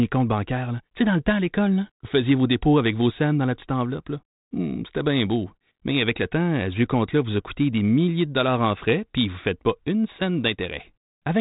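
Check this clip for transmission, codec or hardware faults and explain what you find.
No transmission, codec or hardware fault can be heard in the speech. It is band-limited with nothing above about 3.9 kHz and carries only the faint, level-following grain of ADPCM coding, which fits a working G.726 link at 32 kbit/s.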